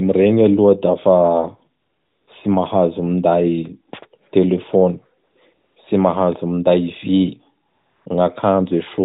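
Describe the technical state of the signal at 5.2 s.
Right around there you get a stretch of AMR comfort noise, from about 5.24 to 5.36 s, so roughly 120 ms. The phone decided nothing was being said and stopped sending speech frames, and the receiving end filled the gap with synthetic noise built from a rough sketch of the background's level and spectrum. You hear the real room tone swapped for a smooth, steady hiss that drops in and then cuts back out.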